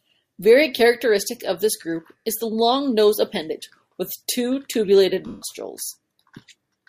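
A speech clip with lost LE Audio frames: at 2.19 s (60 ms, between "characteristic of this group" and "is the long nose") and 5.27 to 5.42 s (after "appendage with two tubulated"). The LC3 decoder replays the last spectrum with scrambled signs, so tone smears into noise that fades rather than cutting to clean silence, which points to LE Audio frame loss rather than simple dropouts.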